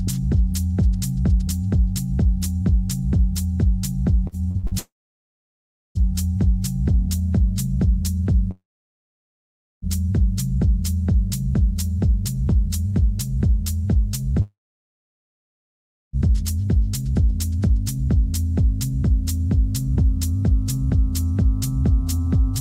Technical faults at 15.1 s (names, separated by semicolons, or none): long network dropout